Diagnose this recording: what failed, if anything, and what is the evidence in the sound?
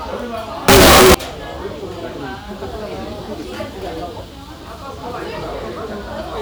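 From 0.68 to 1.14 s the sound turns into very loud, harsh distortion, with quiet moments as loud as the rest. This is a sample-format conversion fault, likely signed and unsigned mixed up on 8-bit samples. The flipped top bit makes every zero crossing jump full range, so the waveform swings between its extremes and the spectrogram smears broadband.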